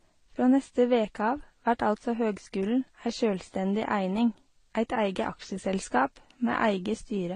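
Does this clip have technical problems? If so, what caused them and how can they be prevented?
Yes. Throughout, the speech sounds dull, with nothing above 10.5 kHz and layered codec artefacts. This is likely transcoding between lossy codecs, pointing to AAC stages followed by Vorbis, each re-encoding the previous damage. Prevent it by encoding only once, directly from the original source.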